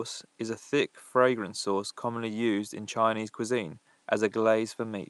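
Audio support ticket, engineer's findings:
Nothing stood out on listening; the room's background noise sits about 39 dB below the speech and belongs to the recording itself.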